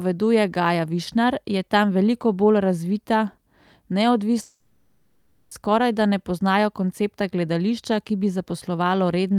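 A speech clip with a long network dropout from 4.41 to 5.53 s: about 1.1 s of sound is concealed by a fading buzz and then briefly drops to silence, before speech resumes at "skorajda ne poznajo koncepta" with the lost portion gone. A likely receiver stall would instead resume without skipping anything.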